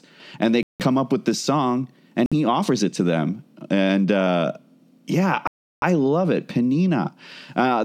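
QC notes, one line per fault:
0.63–5.84 s, Bluetooth stall (three): hard cuts to silence at 0.63–0.81 s after "and they" (169 ms), 2.26–2.33 s before "he offers it to" (55 ms), and 5.47–5.84 s before "love it" (347 ms). Each time the sound picks up again after the gap, which points to a stall. Likely the playback buffer ran empty while delayed packets were resent. Concealment smear would fill the gaps, but these are true silence.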